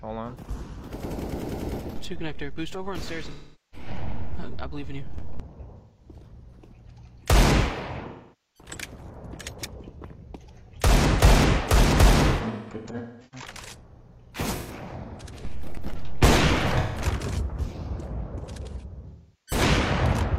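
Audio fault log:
3.29–3.87, 5.77–6.09, 8.07–8.69, 12.30–13.47, 14.55–14.72, 16.78–17.01 and 19.08–19.62 s: AAC frame loss with concealment. The decoder covers the missing audio by repeating the last good spectrum with scrambled phase, which gives a smeared, phasey patch. Longer gaps, such as 0.47 s at 8.07 and 0.43 s at 3.29, fade toward silence and then return. On a spectrogram these appear as blurred, frozen bands. On the waveform the envelope dips. Around 12.30–13.47 s several short dropouts cluster, the longest about a fifth of a second.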